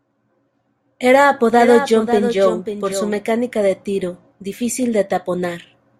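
A speech recording in which, from 1.55 to 3.17 s, the audio is heard twice: a doubled audio track, with a full-band second copy trailing about half a second behind and noticeably quieter, around 10 dB down, ending just before "de tiro difícil". Unlike an echo or reverb, the copy has no decay, no repeats and no room colour, and it switches on and off abruptly. It is likely caused by a second, slower capture path being mixed in.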